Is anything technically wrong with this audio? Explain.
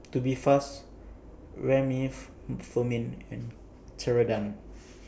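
No, nothing technically wrong can be heard in this speech recording. There is no audible fault to place in time or explain.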